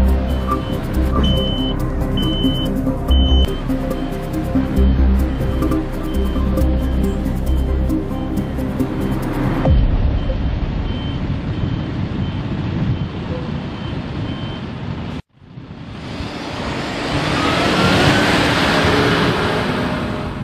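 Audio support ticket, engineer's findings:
Repeated frames: encoder or transport wrote/sent compressed frames twice; decoder replays them. Stutter at 5.64 s (92.9 ms block, fits two ~46 ms frames) and 8.2 s (46.4 ms, one frame). Each plays once extra, lengthening the audio by that amount.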